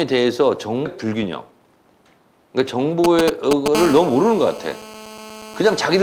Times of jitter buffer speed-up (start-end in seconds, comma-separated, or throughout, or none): 1.51-1.77